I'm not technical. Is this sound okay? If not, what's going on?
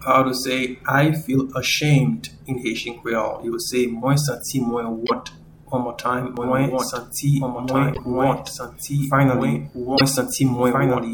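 No. Broken MP3 bit reservoir at 5.06, 7.93 and 9.97 seconds: each time the sound skips ahead with a brief chirp, noise burst or dropout. This is likely because pieces of the compressed file were cut out, so the next parts borrowed data that wasn't theirs.

Doubled audio track from 6.37 seconds to the end: a second, slightly quieter copy of the sound plays about a second and a half behind, starting abruptly. The likely cause is the same audio being recorded twice, once through a slower path.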